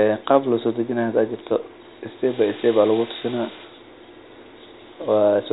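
Nothing stood out on listening to this speech, which sits within the narrow telephone band of G.711 coding with nothing above 3.8 kHz.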